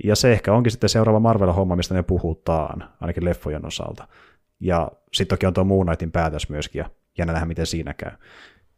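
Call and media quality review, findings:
Nothing to flag on the speech here, no audible faults came up anywhere in the clip.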